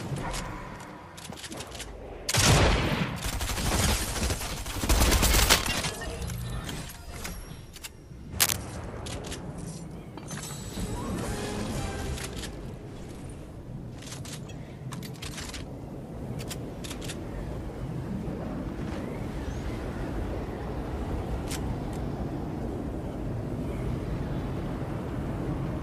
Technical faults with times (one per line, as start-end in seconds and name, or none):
5.28-5.65 cable scratch noise
8.40-8.56 cable scratch noise